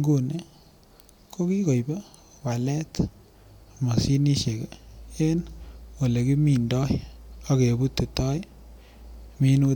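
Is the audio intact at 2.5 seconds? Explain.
Yes, at 2.5 seconds the speech plays through intact, with no audible fault at that moment.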